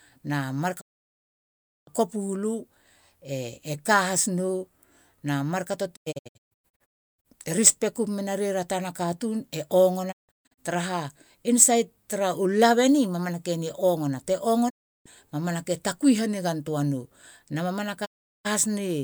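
At 0.80 to 1.89 s, 5.95 to 7.27 s, 10.11 to 10.60 s, 14.68 to 15.08 s and 18.04 to 18.47 s the speech drops out in a digital broadcast dropout: frames fail and the receiver mutes, with a 20 ms fade each way. The second and third dropouts are broken into short holes of up to 320 and 160 ms, which fits frames of about 32 ms. Unlike analogue fading, the gaps are dead silent, with no hiss, and the lost speech is simply skipped.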